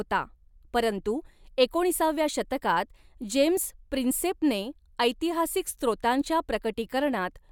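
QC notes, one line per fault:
Nothing to flag here; the speech comes across without any faults to log.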